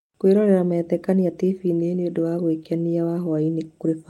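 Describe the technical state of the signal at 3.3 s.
At 3.3 s the speech is still inside a run of repeated timing corrections lasting from 0.25 s to 3.50 s. The receiver keeps trimming short slices so the audio plays at 104 percent. Each edit is small, with no silent gaps like packet-loss dropouts.

Behind those edits is clock drift between sender and receiver, present through the whole clip. The sender's clock runs roughly 4 percent fast, so the jitter buffer keeps overfilling. Unlike a single glitch, the hiccups recur unevenly and always in the same shortening direction.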